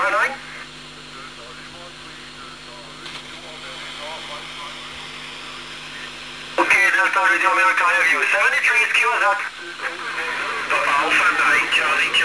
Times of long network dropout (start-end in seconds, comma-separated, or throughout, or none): none